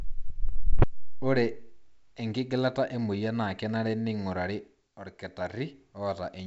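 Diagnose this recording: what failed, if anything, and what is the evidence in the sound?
Nothing failed: the speech has the wideband telephone character of G.722 coding, reaching about 7 kHz with at most a faint hiss in the upper band, consistent with the full 64 kbit/s mode, and no stage in the chain shows a defect.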